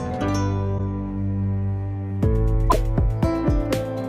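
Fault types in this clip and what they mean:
Corrupt frame decoded: damaged bits in compressed frames were played back as valid, so misread gains and codes put energy at frequencies foreign to the sound. A short blip at 0.78–0.80 s spans a few frames and peaks at about -20 dBFS. A longer, louder burst at 2.70–2.77 s covers several frames and peaks at about -10 dBFS. A dropout leaves a gap and concealed loss gives a smeared repeat, but this adds new chirpy noise.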